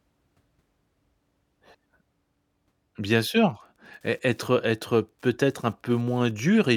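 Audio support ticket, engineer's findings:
Wi-Fi interference, 3.50–6.30 s, under the speech. Steady faint ticking every 102.4 ms, about ten per second, low relative to the speech. A nearby Wi-Fi radio's beacon is rectified in the audio circuit. Regular clicks, unlike continuous mains hum or GSM's 217 Hz buzz.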